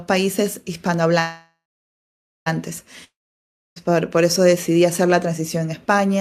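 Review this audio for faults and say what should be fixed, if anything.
A call audio freeze runs from 1.19 to 2.48 s. The speech stalls, and the last sound carries on as a fading buzz, then about 0.87 s of silence. The likely cause is delayed packets draining the jitter buffer. The speech then resumes where it stopped, with nothing lost but everything after it now 1.27 s late. On a spectrogram this shows as a smeared band thinning into a blank column, and the waveform shows a decaying tail and then a flat line. An adaptive jitter buffer with more headroom would prevent it.

A long network dropout spans 3.04 to 3.78 s. The last sound fades as a hiss into about 0.64 s of silence, and the speech returns with roughly 0.72 s of it gone, likely because packets were lost outright. It looks the same as the freeze, a fading smear and then a flat gap, but the speech on either side of the gap does not join up. 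Forward error correction or redundant packet transmission would prevent it.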